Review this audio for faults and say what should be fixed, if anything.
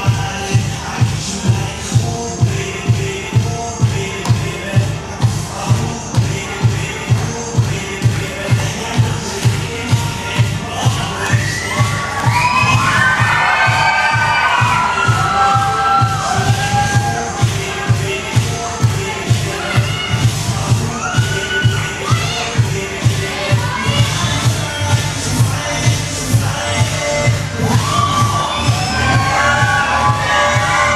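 Nothing here needs fixing; I listened all the way through and didn't hear any technical problems, so it's fine to leave as it is.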